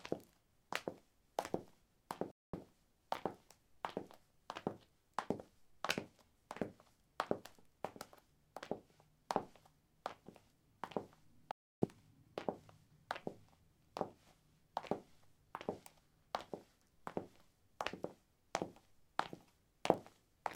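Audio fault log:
2.31–2.63 s, stream reconnect: the sound drops out for 220 ms, then returns with 100 ms it already played; the link broke and the server resent a burst to a fresh decoder, whose first frame fades in.
11.51–11.88 s, stream reconnect: a 305 ms silence, after which the sound picks up about 0.2 s further on, skipping that stretch, because playback rejoined the live stream ahead of where it dropped.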